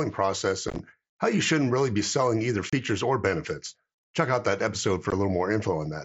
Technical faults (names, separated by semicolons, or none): unconcealed Bluetooth headset packet loss